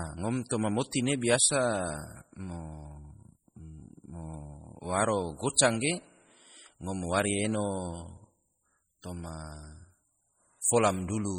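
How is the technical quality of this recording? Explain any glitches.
The recording has heavy, audible coding damage throughout. Across the whole speech clip the sound is watery and swirly, with chirpy, metallic s sounds, likely MP3 compression at a low bitrate, around 32 kbps. Starved of bits, the encoder drops weak frequency lines that flicker between frames. Unlike noise-reduction warble, the swirl is steady, rides on the speech itself, and comes with smeared consonant attacks.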